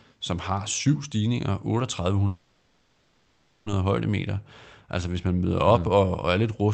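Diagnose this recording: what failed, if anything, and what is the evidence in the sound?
From 2.27 to 3.68 s a fading buzz sounds, then speech resumes intact: a call audio freeze, likely delayed packets draining the jitter buffer.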